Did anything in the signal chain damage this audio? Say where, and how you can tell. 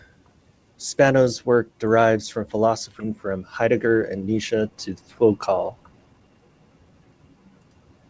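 Yes. Right after "work derives from", at 3.00 s, the speech lurches forward with no gap and no fill, so a chunk of about seven tenths of a second never plays and the two sides butt together almost seamlessly. That is a skip ahead at the network and jitter-buffer stage: a backlog of audio had built up, and rather than play it late the receiver discarded the oldest stretch and resumed from the newer packets, cutting the delay by roughly that amount.

From 3.09 s to 6.50 s the talker sounds rushed, running at 109% of normal rate while the pitch stays put. That is a jitter buffer speed-up, again in the buffer stage of the G.722 call path, whose band stops at 8 kHz. The buffer was still fuller than its target, so it trimmed pitch-period-sized slices over and over, removing around 300 ms in total to pull latency back down.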